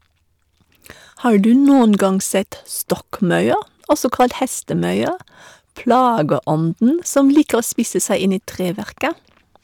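Around 1.35 to 2.05 s the speech hits hard clipping: the peaks are driven about 3 dB past what the stage can pass, so they get sliced flat and throw off harsh upper harmonics. It comes back at 3.91 to 4.25 s, about 5 dB over and the roughest of the lot, then at 5.90 to 6.32 s (about 3 dB) and 7.17 to 7.54 s (about 4 dB). Each time you hear a gritty crackle on the loud moments.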